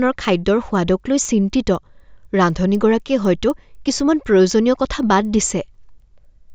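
Throughout the speech, a resampler restarted on every block is audible as faint ticks four times a second. Each 250 ms block was converted from 16 kHz to 48 kHz in isolation. The filter lacked real neighbouring samples at every block edge, leaving small errors.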